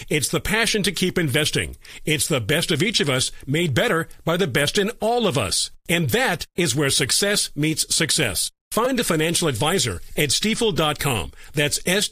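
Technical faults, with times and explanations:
8.85 s, repeated buffer: Right after "where success meets success" and before "a financial advisor at", the output didn't get fresh audio in time, so it replayed the last chunk it had. That chunk is about 5.8 ms long, which fits a 256-sample buffer. It plays three extra times, each with a hard join. Because the loop is so short, you hear a brief buzz-like click lasting about 17 ms rather than a stutter. Essentially no audio goes missing around it.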